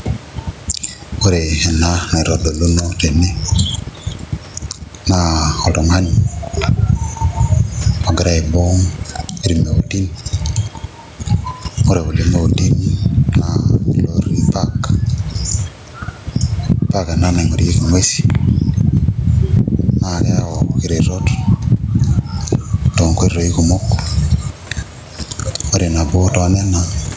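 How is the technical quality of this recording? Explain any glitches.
The big issue is gain pumping, and it runs the whole way through the speech. The level swings by something like 15 dB. The likely cause is input gain set far too high with a fast limiter or compressor clamping down whenever the signal peaks. That leaves loud and quiet passages squashed toward the same level, so the speech sounds flattened. The faint room noise sits well under the speech, and the top end stops around 8 kHz, as you'd expect from call microphone processing.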